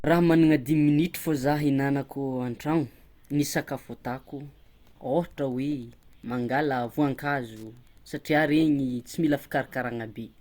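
From 5.11 s to 9.02 s, Wi-Fi interference ticks steadily under the speech, roughly ten times a second. A nearby Wi-Fi radio's beacon, repeating every 102.4 ms, is being rectified by the audio circuit. The ticks sit faint, far below the speech.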